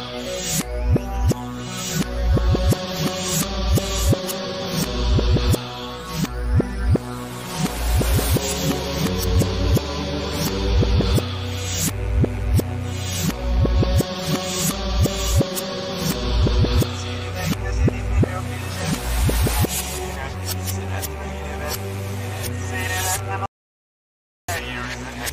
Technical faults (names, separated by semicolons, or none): audio dropout to silence